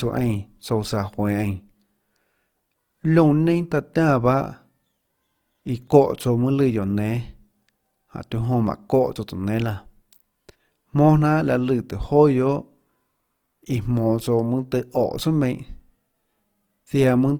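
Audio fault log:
throughout, Opus compression: speech sounds grainy and rough, likely from low-rate Opus music-mode coding; the spectrogram shows noise-filled bands reaching about 20 kHz, with few holes.
5.88 s, dropped buffer (overrun): a small jump as roughly 10 ms of audio is skipped; the waveform shows an abrupt discontinuity with no silent gap.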